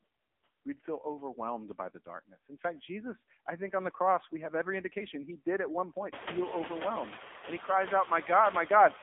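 From start to finish the speech sounds boxed-in and buzzy, with a synthetic edge and no air or sibilant brightness. This is the AMR narrowband mobile codec, heavily degraded. Everything is confined to a telephone band of roughly 250 Hz to 3.6 kHz, with nothing above 3.7 kHz. The voice is rebuilt from a coarse vocal-tract model and sparse pulses, and the harsh buzz fits one of the low AMR-NB modes, around 6.7 kbps.

The background is pumped throughout, dropping away in the gaps and creeping back up under the speech. This is the signature of noise suppressor artifacts: the suppressor pulls down whatever bands it judges to be steady noise, by about 15 dB, one frame at a time. Around 6 s the room noise rises by about 18 dB, settling about 12 dB below the speech.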